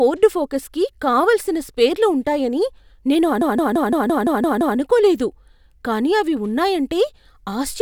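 Right after "కావలసిన స్పేర్లు ఉంటాయని నేను", at 3.41 s, there's a system hang loop: the machine froze while the hardware kept replaying one 171 ms chunk, fitting an 8192-sample buffer. It repeats eight times at about 5.9 Hz until 4.78 s, a machine-gun stutter, with little speech lost.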